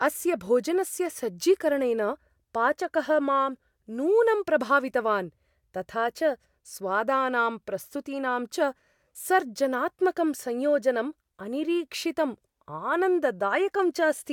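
A speech recording with nothing technically wrong with it.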